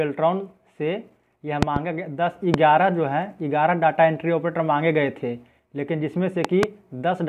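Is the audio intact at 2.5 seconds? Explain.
No, a loud pop hits from 2.54 to 2.56 s, likely a sudden voltage pulse, giving a single sharp crack roughly 20 dB above the sound continuing beneath.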